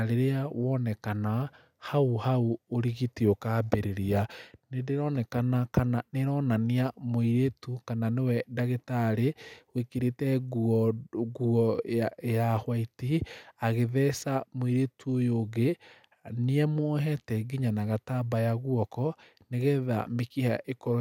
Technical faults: none

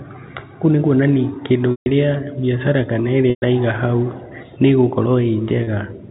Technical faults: packet loss with pitch repetition

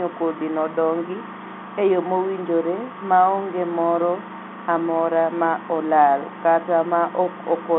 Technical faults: none

